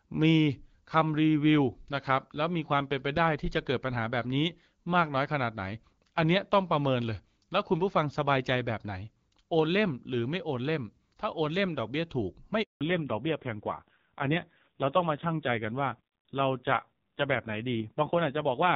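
At 12.63 s a handover gap cuts the speech for 180 ms, to 12.81 s. No frames arrive while the call switches networks, so the sound drops to silence. From 12.81 s to the end, a fallback to narrowband removes everything above 4 kHz. The light wideband character gives way to a duller, rougher sound, which fits a low narrowband rate of around 5.9 kbit/s.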